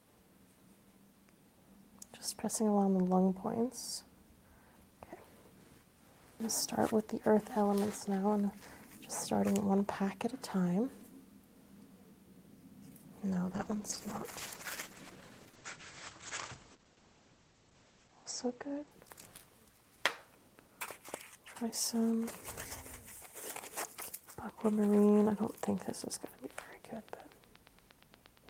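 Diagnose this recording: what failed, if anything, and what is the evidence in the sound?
Muffled, rough sound from 13.55 to 19.93 s marks a call bitrate drop: the codec fell from 32 to 10 kbps, narrowing bandwidth to 8 kHz.

A regular train of clicks, 8.5 per second at roughly signal level, runs from 24.49 s to the end, likely interference in the analogue wiring.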